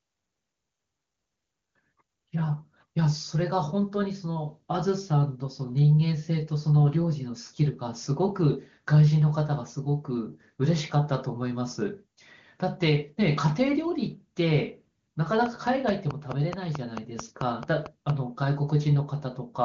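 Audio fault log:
15.46–18.11 s, train of clicks: likely interference injecting regular pulses, about 4.5 per second, heard as roughly fifteen sharp ticks about 10 dB above the speech.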